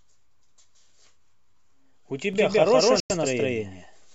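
A doubled audio track runs in this speech recording from 2.33 s to the end: a second, full-band copy about as loud trails by roughly 150 ms, starting abruptly, likely from a slower second capture path. A digital broadcast dropout follows at 3.00 to 3.10 s, where the sound fades out in 3 ms and mutes for 96 ms, which fits about four lost frames, so that stretch is simply gone.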